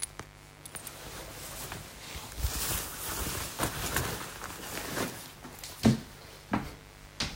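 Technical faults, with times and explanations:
Throughout, mains buzz: a steady, raspy buzz about 20 dB under the sound, from 50 Hz switching spikes whose harmonics climb into the kilohertz range.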